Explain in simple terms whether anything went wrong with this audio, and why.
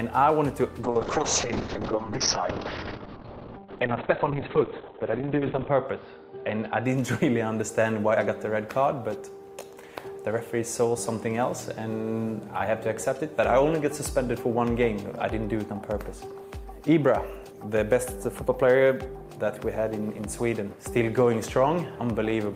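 A call bitrate drop from 0.84 to 6.91 s starved the audio of data, making it rough and muffled, with nothing above 4 kHz.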